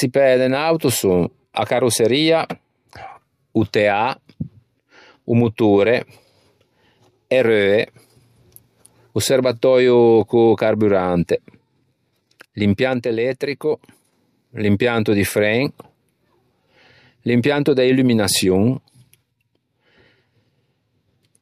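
A speech clip with a sudden gain jump: at 12.93 s, just before "l'impianto di fren", the level drops by about 5 dB in a single step and stays low until 14.13 s, then snaps back. Speech and background noise fall and rise together, so the likely cause is a digital gain change applied without a ramp. The waveform envelope shows a flat-edged step down and up, and a spectrogram shows the whole band, noise floor included, uniformly darker between two sharp vertical edges.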